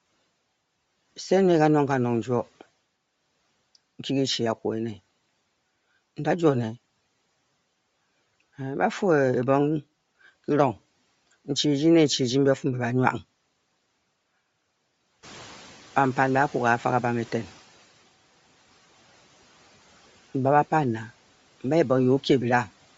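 Throughout the speech, the upper frequencies sound breathy and grainy, with plainly audible damage, likely Bluetooth LC3 compression at a low bitrate, around 32 kbps with 10 ms frames. When the room noise jumps by about 14 dB around 15 s, it comes through with less reduction from 15.22 to 17.62 s, then sinks by about 8 dB. The noise suppressor is catching up, taking 2.4 s to adapt its noise estimate.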